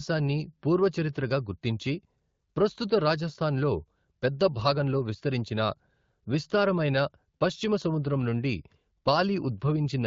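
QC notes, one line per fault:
No faults to log for this speech clip.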